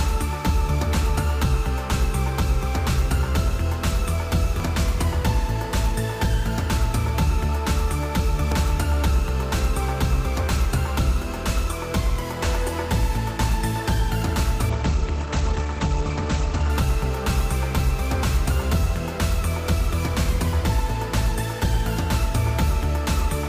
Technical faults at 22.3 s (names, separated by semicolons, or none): none